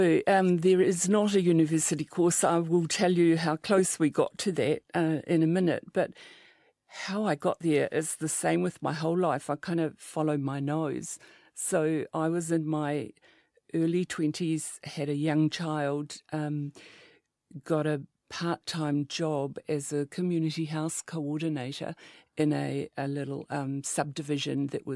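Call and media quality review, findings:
Nothing stood out on listening to this speech recording, and there are no findings to log.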